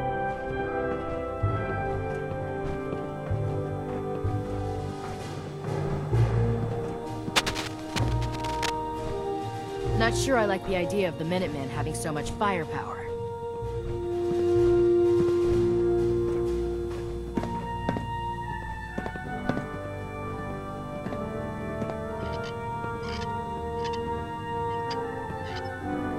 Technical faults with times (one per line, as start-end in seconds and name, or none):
7.35-8.70 cable scratch noise